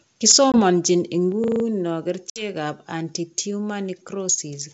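Speech carried over a G.722 wideband call at 64 kbit/s shows several faults. Microphone overload, likely from input gain set too high, drives the peaks about 6 dB past the converter's limit between 0.27 and 0.37 s, flattening around one sample in twenty into a harsh, crackly edge. Within that burst, at 0.32 s, a microphone volume step-down, likely the call software reacting to the clipping, drops the whole level by about 2 dB at once. Packet loss on the ADPCM call leaves a 20 ms hard-edged gap, one packet's worth, between 0.52 and 0.61 s. The decoder's predictor and step size then drift from the sender's, so the sound resumes slightly distorted. A system hang loop from 1.44 to 1.64 s replays a 40 ms stretch of the buffer five times, heard as a 25 Hz machine-gun stutter while the machine stalls. A second ADPCM packet loss from 2.30 to 2.46 s drops 60 ms, about three packets, right before "anti tumor". 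That word comes back distorted until the decoder resettles.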